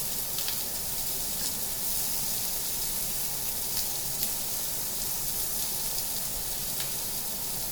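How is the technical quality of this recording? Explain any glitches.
There are no dropouts, clicks, distortion or other audible glitches to report anywhere in this recording of sounds.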